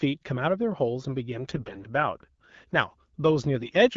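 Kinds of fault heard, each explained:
AMR bit errors: Flipped low-priority bits in the coded frames misplace the excitation pulses and corrupt fine pitch, gain and spectral values. From 1.49 to 1.85 s and 3.58 to 3.74 s the speech keeps pitch and level but turns hoarse, scratchy and gargling.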